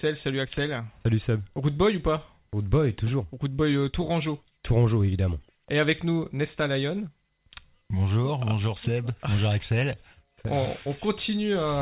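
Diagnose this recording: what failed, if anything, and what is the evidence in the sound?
Nothing failed here: the sound comes through a call path where the top end stops at about 4 kHz, which fits a narrowband telephone codec such as G.711, and there's nothing in it that points to a fault at any stage.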